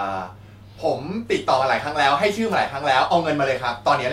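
At 2.51 to 2.54 s, a wireless microphone noise hit: the FM radio link faded briefly, letting receiver hiss surge into a 33 ms static swish, noise rather than a silent digital dropout.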